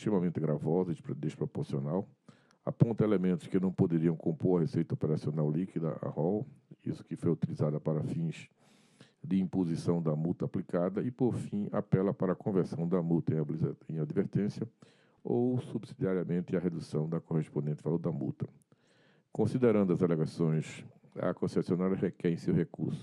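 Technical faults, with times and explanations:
2.70 to 4.20 s, sample clock jitter: an unsteady converter clock mistimes samples by under a microsecond, adding faint hiss that grows on loud, bright passages.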